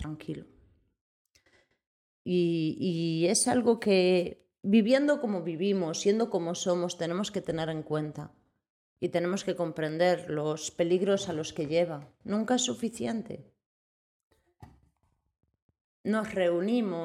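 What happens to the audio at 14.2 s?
Nothing goes wrong at 14.2 s; the audio plays through that moment intact, with no dropout, click, glitch or other fault.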